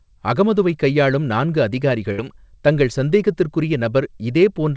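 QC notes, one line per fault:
2.12–2.20 s, burst of packet loss: right after "அகமதுவைக் கையாளும் நான்கு" the speech briefly stalls into a held, fading continuation of the last sound for about 60 ms. The receiver is stretching what it last had to cover packets that never arrived. When audio picks up again at "தங்கள் சந்தேகத்திற்குறிய", roughly 60 ms of speech has simply been skipped. The band-limiting at 8 kHz, which fits a G.722 call path, runs throughout.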